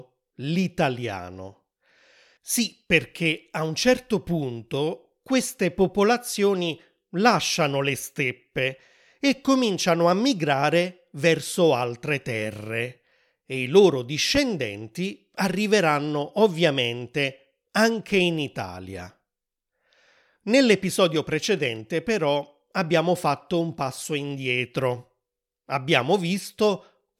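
A single loud pop cuts through this speech clip at 14.35 to 14.39 s, right after "terre e i loro", peaking around 10 dB above the speech, which carries on underneath. It is likely a sudden voltage spike from a plug, switch or static discharge entering the signal chain.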